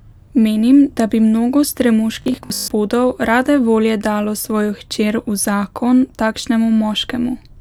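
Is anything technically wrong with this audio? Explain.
Yes. From 2.22 to 2.7 s, just before "rade volje dalo", the speech turns into robotic sound from repeated short buffers. It is likely caused by audio arriving too seldom, so the software keeps replaying the last fragment, roughly half the time, in place of skipped material. The 50 Hz buzz points to a repeated chunk of about 20 ms. Unlike simple dropouts, there is no silence; the voice becomes a rigid, metallic drone that still loosely tracks the syllables.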